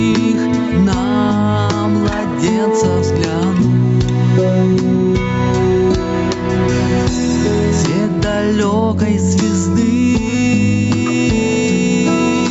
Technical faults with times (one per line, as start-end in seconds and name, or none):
0.00-12.51 gain pumping